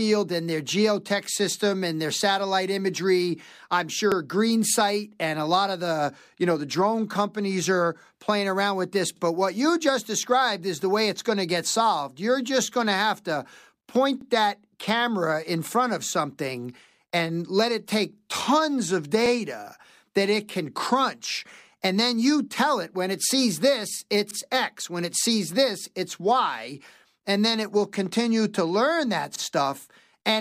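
At 4.12, 9.17, 14.21, 19.26, 24.31 and 29.36 s, a brief stutter interrupts the speech. These are overlapping chunks: the audio was handled in 5-second blocks, and each block began about 48 ms before the previous one finished, so that sliver plays twice at every join. Unlike a dropout, nothing goes missing; a fragment repeats, and the strict regularity, just over 5 s apart, points to chunking.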